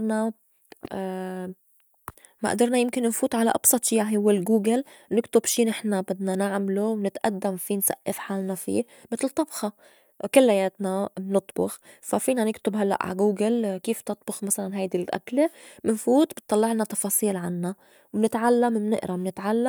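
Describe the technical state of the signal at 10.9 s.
At 10.9 s the speech signal is intact, with no technical fault present at that moment.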